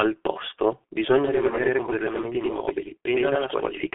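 From start to finish the speech carries heavy G.723.1 codec damage. Nothing reaches above about 3.6 kHz, and the band sits roughly between 200 Hz and 3.4 kHz, so the sound is muffled and thin. The coarse 30 ms frames and slow updates of the voice model leave a hoarse texture and smear consonants together. This fits the codec's higher-rate mode of around 6.3 kbit/s.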